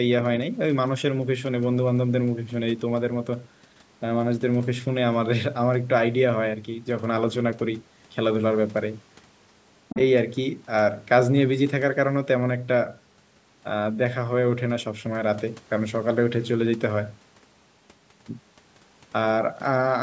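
Other side's voice leaking through, from 9.89 to 10.01 s: a brief scrap of a second voice, lasting about 120 ms and sitting roughly 10 dB below the main speech, surfaces under the talker. This is likely residual echo: the far end's audio, played from the device's loudspeaker, reached the microphone and the echo canceller did not fully subtract it. Like the rest of the call audio, with its top end stopping at 8 kHz, the leak is band-limited.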